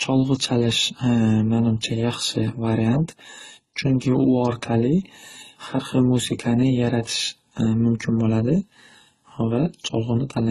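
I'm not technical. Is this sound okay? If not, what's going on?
No, not quite. All the way through, the speech carries several kinds of compression damage heard together, and the brightest, airiest part of the sound is missing, with nothing above about 12 kHz. This is likely transcoding between lossy codecs: the recording was squeezed by one compression format, then re-squeezed by another and another. Each pass kept the earlier damage and added its own, so the different kinds of blur pile up.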